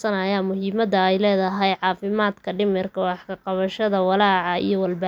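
The speech recording shows no technical faults anywhere in its duration, with the signal intact and continuous throughout.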